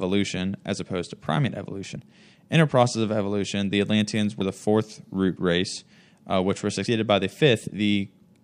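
At 4.41 s, before "the fourth root race", and 6.86 s, after "race uh which were", the speech jumps. This is likely audio missing between chunks: roughly 50 ms lost at 2.5 s boundaries, spliced without silence.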